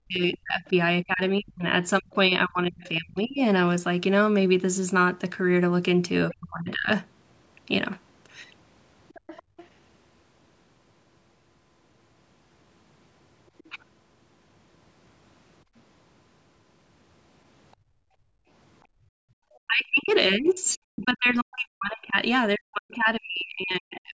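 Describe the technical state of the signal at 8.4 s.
At 8.4 s the signal is intact, with no fault present; the speech there carries the ordinary band limit of call microphone processing, with nothing above 8 kHz.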